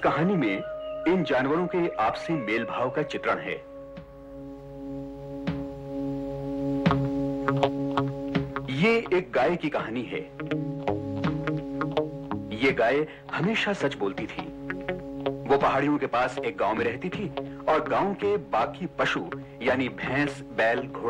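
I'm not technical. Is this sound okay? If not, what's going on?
Yes, no faults can be heard.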